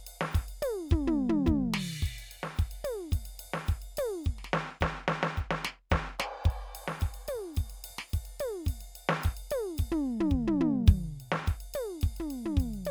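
Listening to this music clip, nothing technically wrong stood out at any point.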